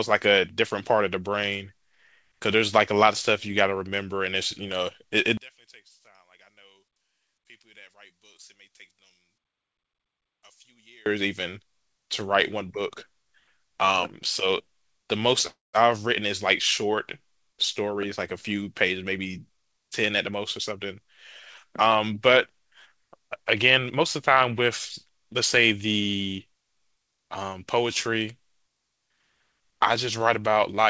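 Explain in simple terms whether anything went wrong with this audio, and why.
Yes, several things went wrong. From 5.37 to 11.06 s, one stereo channel was likely flipped upside down, a fault called one channel inverted. When the two channels are combined into one, the matching parts cancel each other. The speech almost disappears for those six seconds, leaving only a faint trace, and then returns to normal.

At 15.47 s there is a call audio freeze, likely because network packets arrived late and the receiver ran out of audio to play. It stretched the last bit of sound into a fading buzz or hiss and then fell silent for about 170 ms. The speech resumes at 15.76 s exactly where it stopped. Nothing is lost, but a pause of about a quarter of a second has been inserted, so what follows runs later.

Next the receiver had a backlog and tried to catch up, which is called a jitter buffer speed-up. 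It snipped out tiny slices of sound, so the speech plays faster but at the same pitch. From 17.48 to 18.08 s it runs 16% fast, dropping about a tenth of a second. From 18.55 to 21.05 s it runs 6% fast, dropping roughly 150 ms. The speech sounds briefly hurried.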